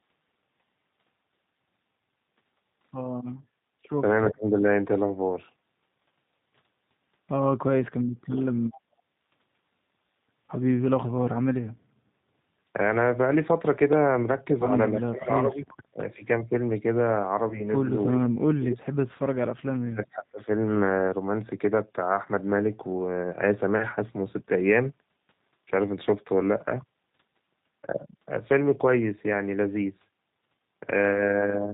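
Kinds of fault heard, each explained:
G.729 codec: The whole clip runs through this 8 kbit/s speech codec, which rebuilds the signal from a vocal tract filter, a pitch predictor and a few pulses per frame rather than sending the waveform itself. The damage is plainly audible: speech sounds rough, slightly synthetic and band-limited. On a spectrogram, energy stops sharply at 4 kHz, and harmonics look smeared and grainy instead of cleanly striated.
Echo leak: At 4.3 to 4.6 s, and briefly at 8.72 to 8.81 s, a faint delayed copy of the far side comes back about 325 ms late. It is about 20 dB and then about 25 dB below the speech, likely because a loudspeaker-side echo canceller let residual pickup through. A spectrogram would show weak, thin traces repeating earlier patterns. The waveform shows only a low-level smear.
Speech suppressed in double talk: From 7.82 to 8.53 s and from 18.08 to 18.88 s the talker's level collapses, dropping by roughly 40 dB at its deepest, over about 0.7 s each time. 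The likely cause is an echo canceller unable to separate local speech from echo while both sides talked, so it attenuated everything. The waveform shows a sudden envelope dip, and the spectrogram shows harmonics fading or breaking into fragments.
Background gated by the echo canceller: At 11.97 to 12.15 s the room sound is pushed down by about 12 dB for roughly 0.2 s while the canceller clamps the microphone, then it returns. On a waveform the noise floor visibly steps down and back up. On a spectrogram a short vertical band of reduced broadband noise appears, with abrupt edges.
VoIP packet loss concealed by the speech codec: At 14.65 s one 10 ms frame is lost, and at 17.49 s two frames, 20 ms in all. Each time the decoder extrapolates from its last pitch and filter, so the sound turns briefly buzzy and fades, staying weak up to 14.70 s and 17.71 s. A spectrogram shows frozen, overly regular harmonics decaying, and the waveform shows repeated periods shrinking in amplitude.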